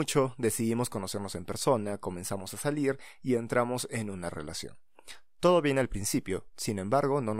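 No technical faults can be heard anywhere in this speech recording. There are no events to place on the timeline, so there are no times to mark.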